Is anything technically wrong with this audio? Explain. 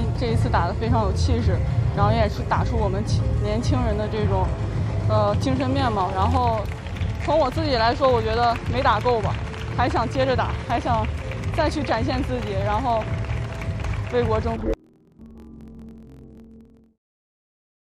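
Yes. From 14.56 to 17.10 s the audio shows interleaved audio read as planar. Each 23.22 ms block of alternating left-right samples is split into halves and played at half speed. That drops everything an octave, doubled and choppy at 43.1 Hz. A spectrogram shows harmonics shifted down and striped at that rate.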